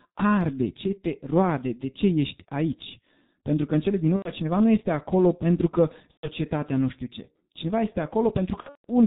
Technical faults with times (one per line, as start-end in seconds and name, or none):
0.00-9.06 G.723.1 codec
4.16-4.30 VoIP packet loss concealed by the speech codec
6.11-6.30 VoIP packet loss concealed by the speech codec
8.60-8.85 VoIP packet loss concealed by the speech codec